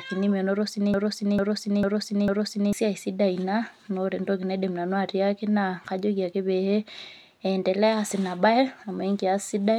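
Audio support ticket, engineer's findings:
Broken-record loop, 0.94–2.73 s. A 0.45 s fragment of speech repeats exactly four times, back to back. The speech that should fill that span is lost. Likely cause is a stalled player, encoder or stream re-sending its last held buffer. On the spectrogram, an identical block of harmonics and formant bands tiles every 0.45 s. The waveform shows the same envelope copied end to end.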